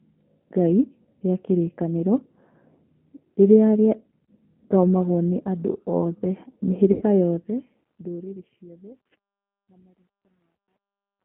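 Throughout, the speech carries the G.729 codec at 8 kbit/s, squeezed into a telephone band of roughly 150 Hz to 3.4 kHz. The encoder resynthesises the voice from a filter, a pitch predictor and a few pulses per frame, so voiced sounds come out faintly rough and synthetic. The band limit by itself would only sound muffled. This plainly audible grainy, synthetic texture points to a low-rate model-based codec.

At 4.25 to 4.31 s, VoIP packet loss concealed by the speech codec replaces about 30 ms of audio, which fits one lost packet. The decoder repeats its last pitch and filter with falling gain, and the result is a brief smear. A longer gap at 6.92 to 7.03 s covers about 90 ms, consistent with three packets in a row. There the held sound fades, and the voice stays weak briefly after the audio returns. At 10.55 to 10.58 s another 30 ms gap repeats the short smear. A plain dropout would leave silence or a click. 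These gaps are instead filled with a stretched, decaying sound.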